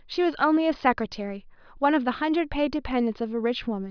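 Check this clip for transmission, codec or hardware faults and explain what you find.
Nothing to flag here: the speech comes through steady and intact, with no transmission, codec or hardware trouble audible anywhere in it.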